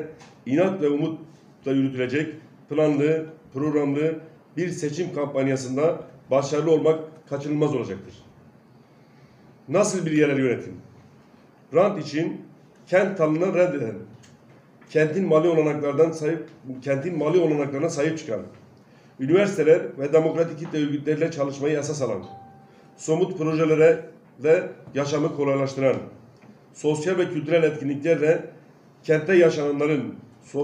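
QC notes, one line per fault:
No fault was heard anywhere in the audio. Nothing in it calls for a timed entry.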